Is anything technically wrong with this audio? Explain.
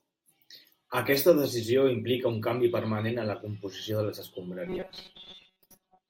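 Yes. From 4.67 s to the end at 6.09 s, the speech becomes robotic sound from repeated short buffers: a rigid metallic buzz at 188 Hz that loosely follows the words. The likely cause is audio arriving too seldom, with roughly 5.3 ms segments looped over most of the gap. Unlike a pitch shift, the buzz stays flat and ignores intonation.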